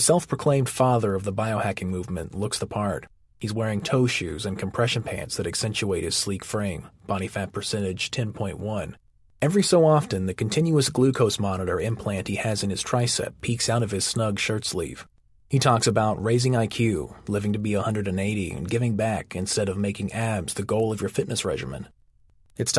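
A speech recording carrying a steady tick at 10 Hz from start to finish, one every 100 ms, that sounds only while there is signal and drops away in the pauses. That points to a resampler restarted on every block: each 100 ms block was converted from 48 kHz to 24 kHz on its own, so every block edge was filtered without its true neighbours. Unlike packet loss or buffer dropouts, nothing goes missing and the ticks keep perfectly even spacing.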